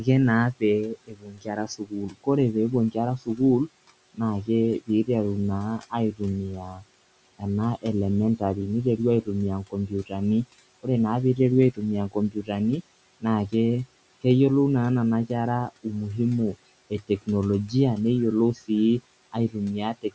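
From 0.0 to 14.2 s, the speech is cut by the noise suppressor. The suppressor mistakes parts of the speech for background and turns them down with it. Around three seconds in all are affected, dropping by up to about 19 dB. Soft consonants and word endings sound swallowed or faint. From 15.3 to 20.1 s it happens again, for under a second in total, with drops of up to about 18 dB.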